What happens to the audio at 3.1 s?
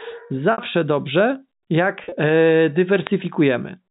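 A loud pop lands between 3.07 and 3.09 s, most likely a voltage pulse from a plug, switch or static discharge, striking well above the speech level as one sharp thump. The waveform shows a tall isolated spike; the spectrogram shows a thin full-band vertical stripe.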